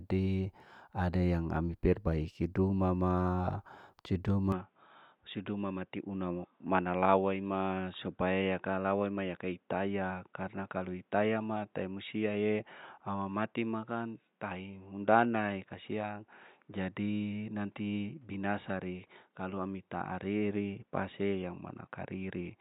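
Speech recording in which the sound changes character abruptly at 4.52 s and stays that way to the end. From that point nothing is present above 3.8 kHz, so the speech turns dull and boxy, the level falls by about 5 dB, and a new background noise appears at roughly 45 dB below the signal. There is no gap at the transition. This pattern points to the input switched to a poorer device, likely a different microphone or headset.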